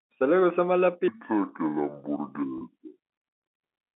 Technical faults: section at the wrong speed; packet loss with pitch repetition

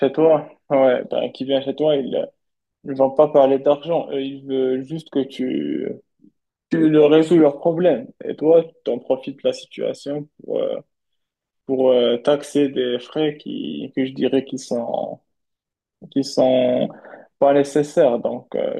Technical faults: none

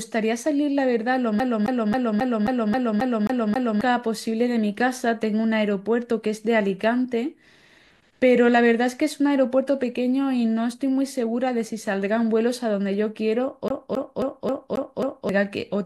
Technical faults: CD stuck on one turn

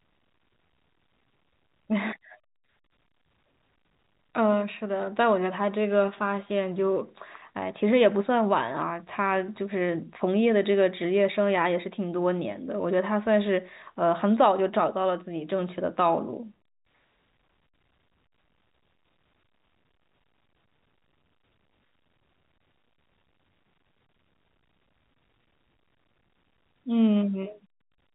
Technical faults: none

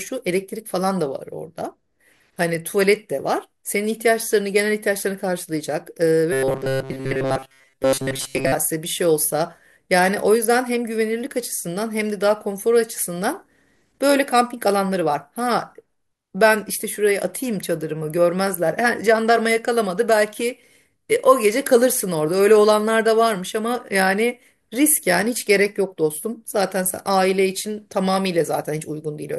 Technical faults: robotic sound from repeated short buffers

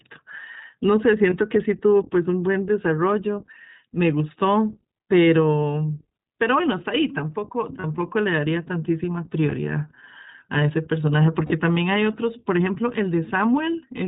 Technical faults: iLBC codec; lost iLBC frames

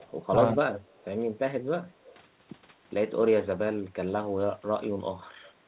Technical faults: echo leak

